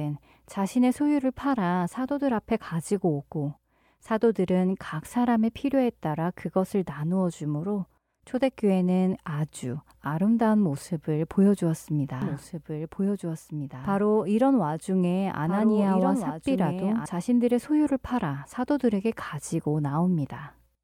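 From 12.22 s to 17.06 s a second copy of the speech runs about one and a half seconds behind the first, roughly 5 dB quieter, with no reverb tail, and it cuts in and out abruptly. This doubled audio track likely comes from the same signal being captured again through a slower path.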